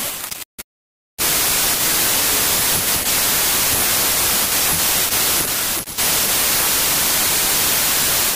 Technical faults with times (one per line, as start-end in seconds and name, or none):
0.00-8.35 wrong sample width